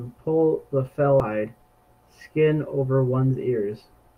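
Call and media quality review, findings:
Very short blip in the speech at 1.20 s. Damaged data in the compressed stream: the decoder misreads the corrupted bytes, loses frame sync, then resyncs at the next header.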